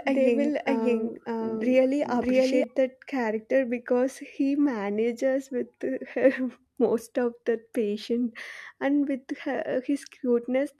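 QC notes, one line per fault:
0.00–2.64 s, doubled audio track: A second copy of the same speech is mixed in, likely from the signal being captured twice, once through a slower path, so the duplicate trails by roughly 0.7 s at about the same level as the original. The doubling is already running when the clip opens and cuts off abruptly between "they will" and "that character because he". The late copy is full-band and dry, with no decay or room colour, so two overlapping streams of the same speech sound step by step out of sync.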